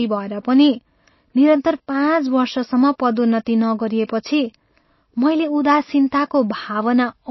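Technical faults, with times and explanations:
Throughout, MP3 compression: treble ends sharply at 5.8 kHz, spectrogram shows a flat ceiling and flickering holes, likely from a very low bitrate around 24 kbps, giving watery, swirly speech.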